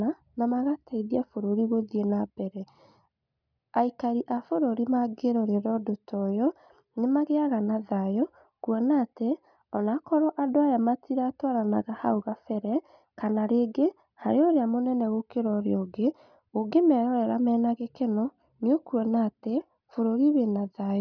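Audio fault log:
No audible faults found in this speech recording; nothing to log.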